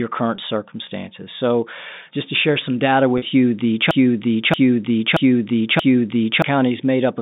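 At 0.36 to 0.38 s and again at 3.18 to 3.22 s, packet loss with pitch repetition occurs: audio went missing, about 20 ms and then 40 ms, consistent with one and then two dropped packets. The receiver bridged each gap by repeating the last pitch period, so both spots sound briefly held and buzzy. From 3.91 to 6.42 s a broken-record loop takes over, the likely result of the playback or stream stalling and resending its last fragment. A 0.63 s piece plays four times back to back, replacing the audio that belonged there, all heard through the narrow 150 Hz to 3.7 kHz band of G.711 telephone coding.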